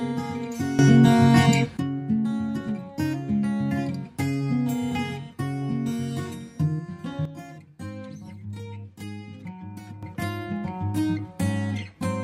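At 0.79 s the sound and its background noise leap up together by about 13 dB, dropping back at 1.77 s. From 7.25 s to 10.03 s both fall by about 10 dB. Each is a sudden gain jump, likely a digital gain change applied instantly without a ramp.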